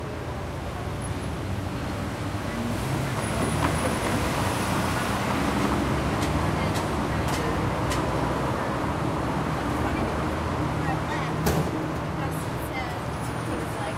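At 13.54 to 13.56 s, near the very end, there is a brief burst of damaged data in a compressed stream. Part of the encoded stream was wrong at that point. The decoder could not read those frames properly and lost its place. It then hunted for the next valid frame header to resume. The result is a short glitch lasting about 20 ms.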